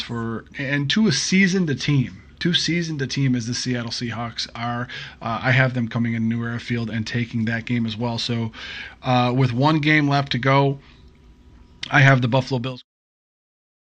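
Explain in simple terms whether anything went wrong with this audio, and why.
Nothing went wrong with this audio; the sound simply fades out smoothly near the end, from around 12.5 s to 12.86 s, the way an editor would finish a recording.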